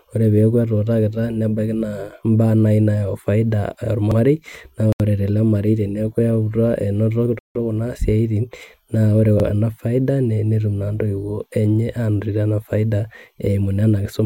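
At 4.11 s the speech stutters as 50 ms of sound plays twice. These are overlapping chunks: the audio was handled in 5-second chunks, and each one began before the previous one ended. On a waveform, a short stretch appears duplicated back to back, with a visible seam. The same stutter returns at 9.40 s.

At 4.93 s and again at 7.39 s the sound drops to silence for 74 ms and then 161 ms before carrying on. This is likely a Bluetooth stall, in which the headphones' buffer ran empty while delayed packets were resent. A spectrogram shows blank vertical gaps.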